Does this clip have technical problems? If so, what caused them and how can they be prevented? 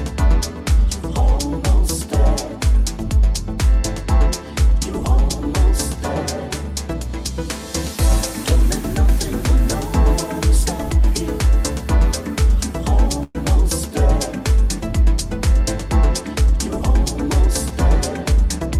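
Yes. From 13.23 to 13.38 s the sound stops progressing and is replaced by a fading buzz-like continuation of the last moment, ending in a very short silence of about 10 ms, before resuming exactly where it left off. This is likely a call audio freeze: delayed packets emptied the jitter buffer, and the receiver filled about 114 ms rather than dropping anything, so everything after arrives 114 ms late. Packet-loss concealment would instead skip material. Prevention: reduce network jitter or allow a deeper jitter buffer.

From 15.50 to 17.86 s the audio runs about 3 % fast, and from 18.32 to 18.78 s about 8 % fast. This is jitter buffer speed-up. The receiver had built up excess delay and trimmed it by cutting out tiny pitch-period slices, roughly a tenth of a second in the first stretch and around 50 ms in the second. Because whole periods are removed, the pitch stays put, unlike a resampling error, which would raise it. 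Prevention: smoothing out bursty packet delivery stops excess delay from building up.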